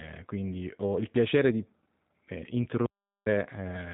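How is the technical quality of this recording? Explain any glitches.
Technical quality is limited by plainly audible low-bitrate coding and one gap of dead silence.

Throughout, the speech has the rough, synthetic texture of the G.729 codec, rebuilt from a filter and pulse model. It sounds like an 8 kbit/s stream, and nothing above 3.8 kHz survives.

From 2.86 to 3.26 s there is an audio dropout to silence. About 0.4 s is lost to silence, likely from the input or link failing while recording continued.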